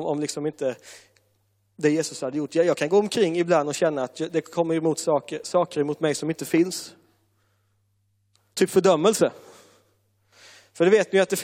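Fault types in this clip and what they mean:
No faults detected in this speech recording.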